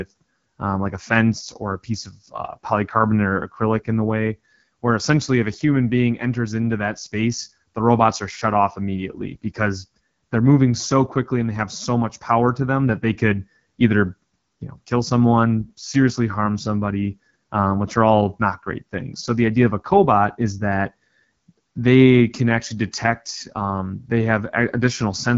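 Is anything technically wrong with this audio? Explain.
Yes. The AMR wideband (HD Voice) codec affects the whole clip. The speech has no content above 7.3 kHz. Below that, the codec models speech up to 6.4 kHz with a vocal tract filter driven by pulses, then fills the band from 6.4 to 7 kHz with shaped noise. The damage is plainly audible: the speech sounds rough and raspy, which points to one of AMR-WB's lowest modes and fits about 8.85 kbit/s.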